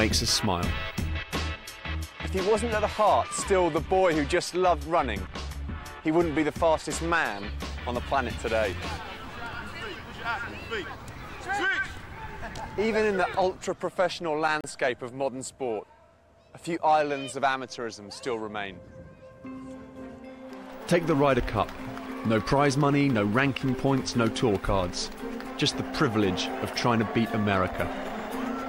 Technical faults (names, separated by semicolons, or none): digital broadcast dropout